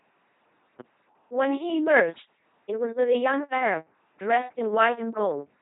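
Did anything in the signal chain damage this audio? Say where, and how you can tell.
Yes. The damage is at the codec stage: the speech has been through an LPC-10 vocoder for its entire length, with heavy damage and nothing above 3.8 kHz. Rather than carrying the waveform, the coder keeps only a coarse vocal tract filter and switches each moment between a pulse-train buzz and noise. That gives the flat, buzzing robot quality throughout, with hiss or buzz where voicing is misjudged, which fits a 2.4 kbit/s parametric stream.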